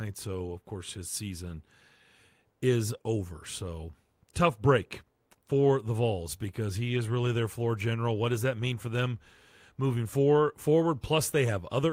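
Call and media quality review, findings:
No faults found.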